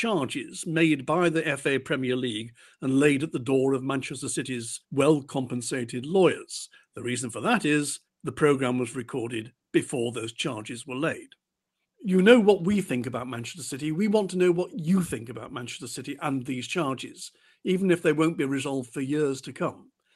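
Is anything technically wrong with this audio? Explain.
No, nothing is technically wrong.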